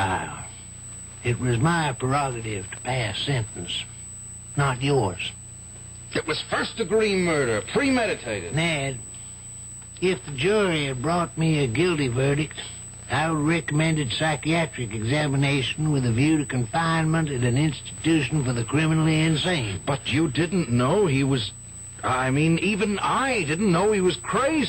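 Throughout the clip, current drawn by the USB bus in 125-microsecond microframes leaks into the audio path through power or ground, producing USB whine: a steady, fixed-pitch tone at 8 kHz, sitting roughly 20 dB below the signal and heard as a thin, piercing whistle.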